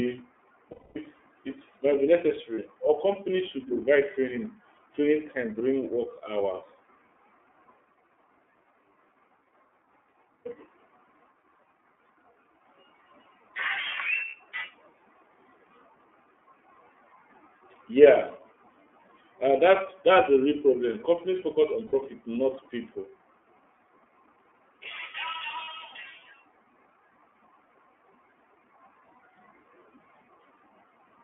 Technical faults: iLBC codec; lost iLBC frames

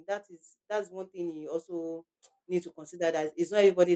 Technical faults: automatic gain rising

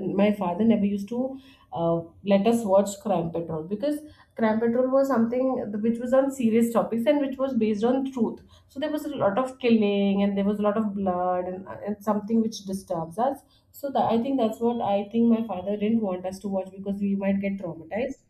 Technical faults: channels drifting apart

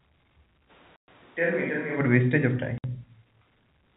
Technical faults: switch to a distant microphone; packet loss filled with silence

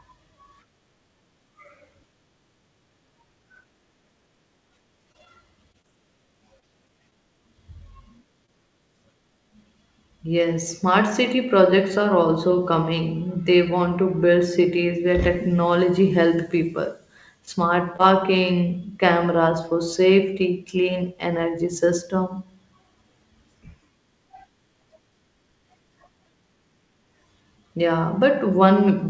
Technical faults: repeated packet loss (robotic sound); short concealed packet loss

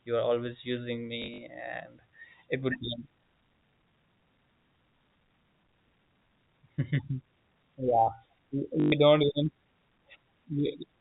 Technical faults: packet loss with last packet repeated

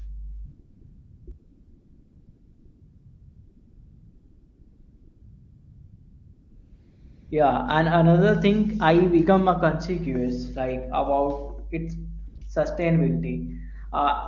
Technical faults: mains hum; AMR comfort noise

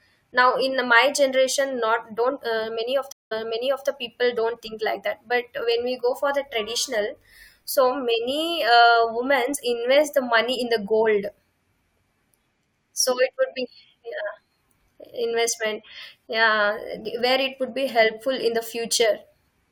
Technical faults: stream reconnect

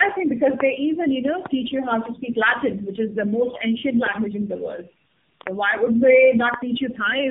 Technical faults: tandem speech coding

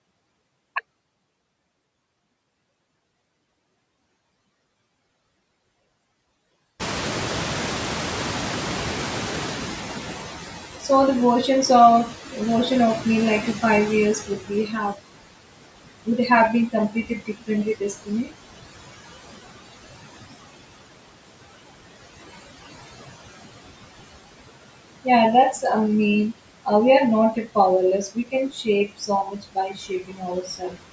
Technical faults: noise suppressor artifacts; noise suppressor catching up; speech cut by the noise suppressor

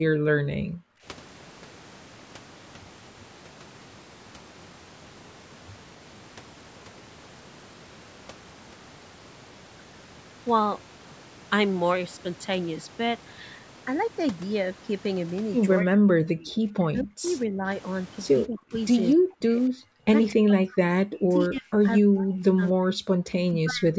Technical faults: speech suppressed in double talk

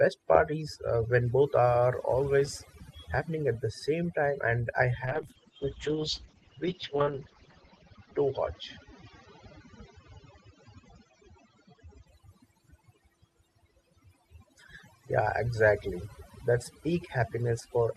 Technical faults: overdone noise removal; call bitrate drop

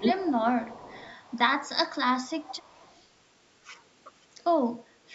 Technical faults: speech suppressed in double talk; echo leak

